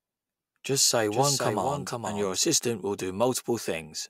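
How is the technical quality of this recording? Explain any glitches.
The recording has one glitch: a doubled audio track from about 1.10 to 2.38 s. In that stretch a second copy of the speech runs roughly half a second behind the original and about 5 dB quieter, so everything sounds stuttered and echoed. The echo has no reverb tail or room sound, and it cuts in and out abruptly. It's likely the signal getting captured twice, with one copy arriving through a slower path.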